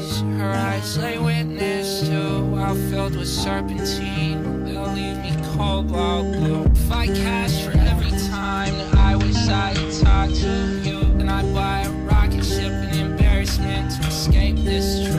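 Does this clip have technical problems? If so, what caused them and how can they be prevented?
Yes. From 8.20 to 11.17 s, digital radio blending to analogue: a 446 ms cross-fade to FM brings hiss well below the signal and a level shift of about 1 dB. Better reception or disabling analogue blend would prevent it.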